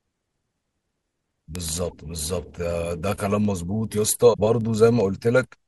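A speech clip with a steady run of word clock ticks from 0.11 to 5.66 s, about every 0.15 s, some fifty in all. Each one is a single dropped or repeated sample, which fits a receiver clock drifting around 150 ppm from the sender's. On top of that there are short garbled glitches at 1.90–1.93 s and 4.33–4.40 s, likely a broken MP3 bit reservoir, where cut frames left the next ones decoding borrowed bytes, which fits 26 ms MP3 frames.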